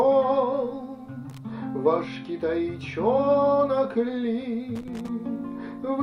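Two bursts of loose connector crackle break up the sound. The first runs from 1.30 to 1.38 s, a quick scratch of about 80 ms. The second is longer, from 4.76 to 5.09 s, roughly a third of a second. Both are irregular and gritty. A worn or dirty contact is making and breaking as it shifts. Each break chops the signal. Any DC on the line turns those breaks into pops.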